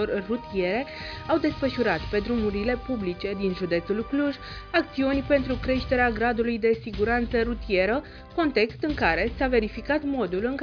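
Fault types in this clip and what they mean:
No audible technical faults turn up in this recording.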